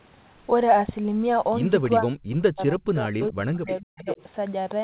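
From 2.0 to 4.08 s, the echo canceller likely could not separate the local talker from loudspeaker echo while both sides spoke, so speech is suppressed in double talk. For about a second and a half in total, the speech dips by up to around 40 dB.

At 3.67–3.76 s and again at 3.97–4.23 s, the far end's loudspeaker echo was incompletely cancelled, a likely echo leak. A copy of the speech delayed by 482 ms comes back in short scraps, about 15 dB and then about 10 dB below the speech.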